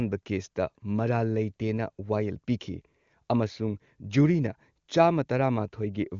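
No faults can be heard in the speech: it has passed through the AMR wideband (HD Voice) codec at its top rate of 23.85 kbit/s, which keeps it clear, with nothing present above about 7.4 kHz, as that band limit implies.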